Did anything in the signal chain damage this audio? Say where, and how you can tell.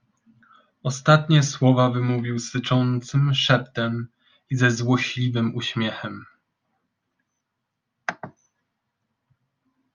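No, nothing in this chain audibly damaged the recording.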